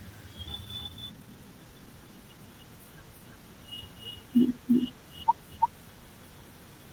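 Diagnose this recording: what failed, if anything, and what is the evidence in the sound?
Throughout the recording, a second copy of the speech trails the original by about 300 ms at roughly equal level. It is full-band, with no decay or room colour. This is a doubled audio track, likely from the capture or routing stage picking the signal up twice through a slower path.

From 0.65 to 2.63 s, a jitter buffer speed-up in the network receive buffer is audible. After delayed packets arrived together, the receiver repeatedly cut short pitch-period slices to shed about half a second of backlog. The speech there runs at 124% pace, hurried but at unchanged pitch.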